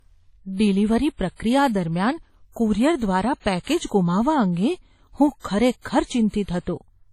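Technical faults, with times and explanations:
Throughout, low-bitrate audio saved at a high bitrate. The speech has nothing above about 14.9 kHz, a hard ceiling that stays put from start to finish. The top end sounds dull, and low-bitrate smearing stays in the speech. This likely comes from an earlier low-bitrate pass, consistent with WMA at around 32 kbit/s, later re-encoded as high-bitrate MP3, around 320 kbit/s. The second encode only preserves that first pass. It cannot restore the missing top end.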